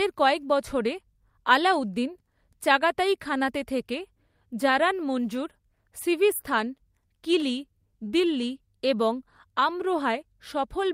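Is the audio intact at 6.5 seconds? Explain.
Yes, at 6.5 seconds the audio is intact, with no audible fault at that moment.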